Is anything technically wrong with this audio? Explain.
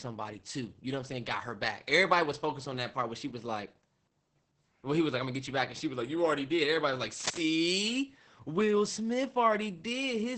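Yes. There are two problems: heavy Opus voice compression across the whole clip, and a short burst of cable scratch noise.

Opus voice compression runs throughout. The speech has nothing above about 8.7 kHz, and what remains sounds muffled, hoarse and faintly robotic. That points to the SILK speech coder working at a very low bitrate, around 10 kbps. At that rate it models the voice with a coarse linear-prediction filter and a crudely quantised excitation. A plain low-pass filter would dull the top end but leave the speech clean. Here the roughness is built into the voice itself.

Cable scratch noise appears from 7.2 to 7.41 s. It is a dense, uneven rustling burst, only a few dB below the speech. The likely cause is a worn cable or connector being moved, so that its contact resistance jumps about rapidly. A single click or a dropout would be one sharp event or a gap. This is instead a cluster of irregular crackle lasting about a fifth of a second, laid over the sound rather than replacing it.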